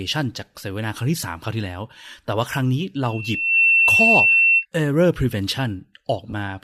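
At 3.03 s a loudspeaker feedback squeal begins: the microphone picks up the loudspeaker it feeds, and at 2.7 kHz the loop gain exceeds one, so that tone feeds on itself. It swells over about half a second into a piercing whistle that ends up roughly 10 dB above the speech, then stops at 4.66 s. On a spectrogram it shows as a single bright horizontal line at 2.7 kHz, intensifying, and the waveform envelope bulges through that span.

From 6.30 to 6.34 s there is a gap of lost LE Audio frames. The 30 ms gap fits three 10 ms frames, which would also fit the light LC3 compression that is the likely cause of the faint grainy edge on the speech. The decoder repeated the last spectrum with scrambled phases, so the speech briefly smears into a noisy blur. A spectrogram shows a short block of diffuse, texture-less energy with no harmonic lines. The waveform shows a brief stretch of noise-like signal.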